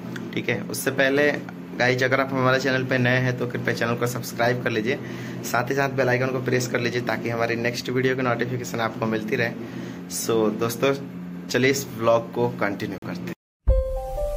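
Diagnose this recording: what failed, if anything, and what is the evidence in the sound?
Driver or buffer: a block of digital silence, 12.98 to 13.02 s, fits an unfilled 2048-sample buffer; flat waveform, blank spectrogram column.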